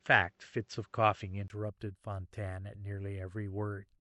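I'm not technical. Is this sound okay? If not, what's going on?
No. For the first 1.5 seconds the speech sounds duller and a little boxy, with the crisp top end missing (nothing above about 7.7 kHz), a faint background noise, and a slightly different loudness. At 1.5 s there is a tiny gap of about 20 ms, and then the voice suddenly clears up. That sudden change points to an input switched to a poorer device, likely a lower-quality microphone or headset being used at the start before recording moved to the better one. A steady filter or poor compression would sound dull throughout, not snap to clear at one moment.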